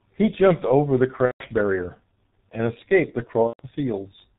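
Throughout, there is a block size mismatch (truncated): one stage writes longer blocks than the next reads, so the tail of each block is discarded. That produces a steady 100 Hz buzz at the block rate, while timing and pitch stay essentially normal because the two sizes differ only slightly.

Also throughout, the speech passes through the G.723.1 codec at a low rate, which fits about 6.3 kbit/s. Nothing above 4 kHz survives and the voice model updates slowly, so heavy codec damage leaves the speech muffled and hoarse, with smeared consonants.

From 1.25 to 1.44 s, VoIP packet loss is concealed by the speech codec. About 150 ms of audio went missing, consistent with five 30 ms frames, and the decoder extrapolated from its last pitch and filter. The speech stretches into a fading buzzy tone or coloured noise and stays weak briefly afterwards.

From 3.47 to 3.61 s, the same concealed packet loss returns, covering about 120 ms, which suggests four lost frames. 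Again the decoder repeats its last state at falling gain, so the sound smears into a decaying tone or noise before the speech recovers.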